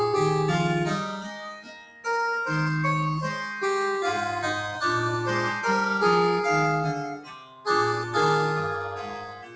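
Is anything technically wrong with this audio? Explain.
Yes. A speech-oriented noise suppressor is working on material it was not designed for, and it audibly pulls down parts of the sound.

Noise suppressor applied to music or sounds: throughout the clip, the suppressor treats sustained, steady content as background noise and attenuates it. Its gain swings by roughly 15 dB. Transients pass at near full level, but anything held or decaying is pushed down, so the sound pumps and thins instead of keeping a stable level. The audio also travels through a wideband call path with nothing above 8 kHz, which fits G.722.

Sound cut by the noise suppressor: at specific moments the gain reduction goes deeper than the background pumping. From 1.05 to 2.07 s and from 7.07 to 7.68 s, the sound drops by about 15 dB. From 8.0 to 8.16 s there is a shallower dip of about 5 dB. From 8.74 s to the end, the level falls by about 20 dB. 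In each case the suppressor has classified steady or fading energy as noise, so sustains sink and tails are cut short.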